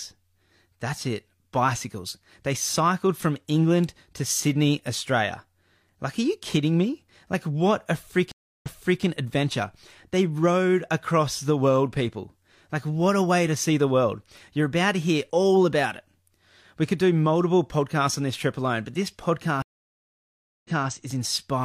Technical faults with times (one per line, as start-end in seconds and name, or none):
8.32-9.03 stream reconnect
19.62-20.88 stream reconnect